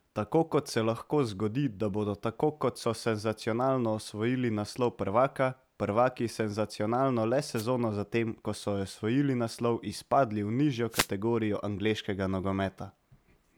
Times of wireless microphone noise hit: 7.55-7.65, 10.90-11.09

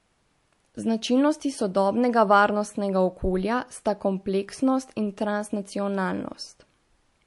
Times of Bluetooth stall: none

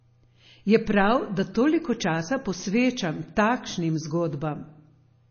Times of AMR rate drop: none

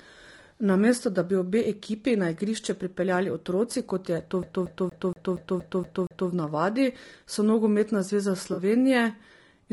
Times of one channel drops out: none

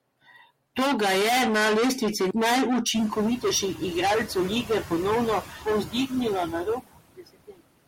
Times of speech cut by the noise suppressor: 5.42-6.12, 7.17-7.61

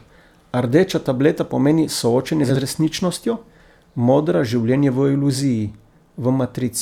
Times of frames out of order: 2.44-2.57

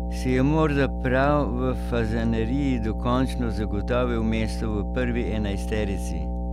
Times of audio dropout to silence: none

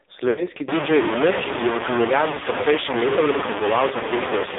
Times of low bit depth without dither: 0.68-4.58

